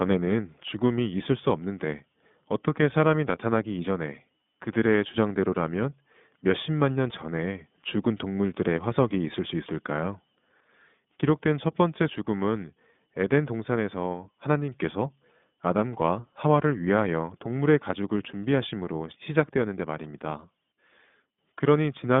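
From start to end the speech sounds thin, boxed-in and plainly rough, with a buzzy, synthetic edge and nothing below 150 Hz or above 3.6 kHz. This is iLBC codec damage. Each frame's excitation is coded on its own, consistent with 20 ms frames at 15.2 kbps.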